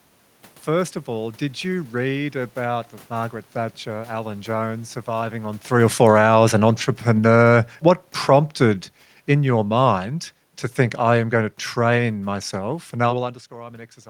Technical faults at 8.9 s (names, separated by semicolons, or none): automatic gain falling